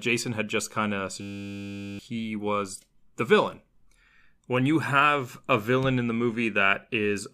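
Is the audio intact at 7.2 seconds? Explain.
Yes, the speech at 7.2 seconds is intact, with no audible fault at that moment.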